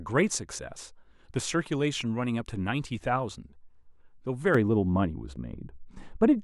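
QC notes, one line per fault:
4.55–6.43 s, de-emphasis applied wrongly. A treble cut meant to reverse pre-emphasis hits speech that had none, or is applied twice. The top slopes down about 11 dB by 10 kHz. The speech turns dull and muffled.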